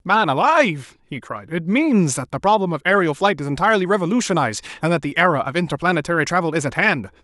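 Speech recording, no technical faults detected anywhere in the clip.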